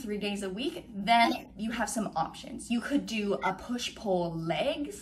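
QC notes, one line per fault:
1.24–1.50 s, corrupt frame decoded: a run of several damaged compressed frames was played anyway. Flipped bits gave wrong gains and misread spectral codes, so energy lands at the wrong frequencies as a chirp, squeak, blip or burst of noise peaking around -15 dBFS.
3.41–3.47 s, corrupt frame decoded: a shorter hit, probably only a few frames, heard as a brief chirp, squeak, blip or burst of noise at about -25 dBFS. It lasts only as long as the damaged frames.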